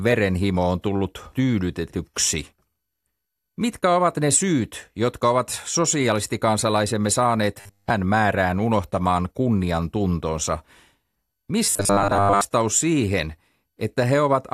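Audio most likely arrived too seldom, so the player looped a 10 ms chunk, giving robotic sound from repeated short buffers: a rigid 100 Hz buzz from 7.60 to 7.90 s, between "sosialistikansalaisemme" and "määrään", throughout, and again from 11.67 to 12.41 s across most of that stretch.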